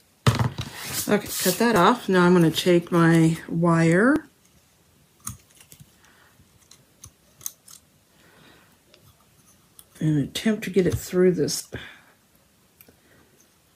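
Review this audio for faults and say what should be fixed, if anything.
At 1.76, 4.16, 11.6 and 12.68 s the sound jumps ahead by roughly 40 ms with no gap of silence, unlike a dropout, which leaves a silent hole. This is likely a dropped buffer (overrun). Larger capture buffers or higher input-thread priority would prevent it.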